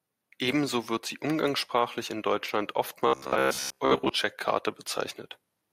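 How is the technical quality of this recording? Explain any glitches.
The recording has one clear glitch: robotic sound from repeated short buffers between 3.07 and 4.09 s. For about a second the speech becomes a rigid, metallic buzz locked at 66.7 Hz that still loosely follows the words. The likely cause is audio arriving too late, so playback loops the last 15 ms chunk and skips most of the real audio. On a spectrogram this shows as evenly spaced horizontal harmonic lines at multiples of 66.7 Hz. The waveform shows identical segments repeating every 15 ms.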